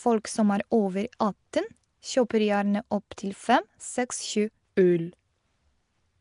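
Throughout the speech there is a plainly audible rough hiss and underwater smear, likely from Nellymoser compression at a rate that fits 44 kbps. The spectrogram shows patchy, noise-filled bands with nothing above 10.6 kHz.

At 3.17 s, between "atten kjøper gjerne" and "fem seks", pre-echo spreads quantisation noise 10 ms ahead of an attack. It shows as short hiss in the waveform just before the onset.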